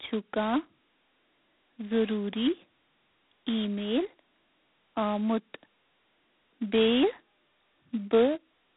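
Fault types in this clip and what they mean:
G.726 ADPCM: the speech was coded by an adaptive differential coder that sends only a few bits per sample describing how far the signal strays from its own prediction. The heavy damage points to the 2-bit, 16 kbit/s mode. So coarse a step leaves large quantising errors, heard throughout as a harsh, rasping hiss that rises and falls with the speech level. The telephone band keeps about 200 Hz to 3.7 kHz, with nothing above 3.9 kHz.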